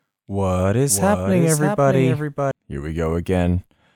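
From 0.89 s to 2.51 s, a second full-band copy of the speech trails by roughly 0.7 s at about 5 dB lower, abruptly starting and stopping: a doubled audio track, likely from a slower duplicate capture path.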